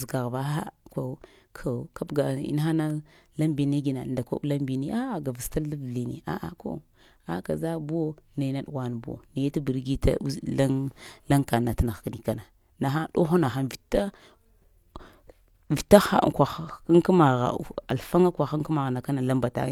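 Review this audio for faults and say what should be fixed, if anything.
Nothing here needs fixing; no faults were heard.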